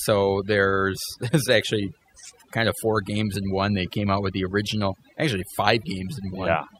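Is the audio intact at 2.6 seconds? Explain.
No. At 2.6 seconds the speech is affected by overdone noise removal, present throughout the clip. Noise reduction set too strong cuts frequency bands near the noise floor, taking quiet parts of the voice too. The background drops and breaks up into twinkling specks.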